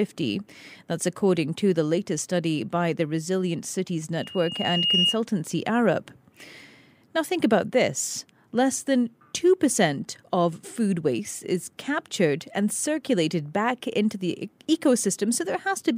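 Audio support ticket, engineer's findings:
Loudspeaker feedback squeal, 4.20–5.20 s. Pure 2.8 kHz tone swells over roughly three-quarters of a second to a few dB above the speech. Mic picking up its own loudspeaker, loop gain above unity at 2.8 kHz.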